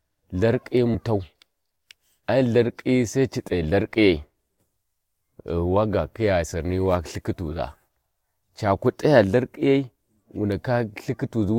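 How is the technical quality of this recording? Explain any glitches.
The speech has two dropouts from compressed frames skipped. At 0.94 to 0.96 s, and at 2.22 s just before "ai ltharkiyi sai ci", a handful of compressed frames were lost or rejected, so playback leaps ahead by roughly a tenth of a second.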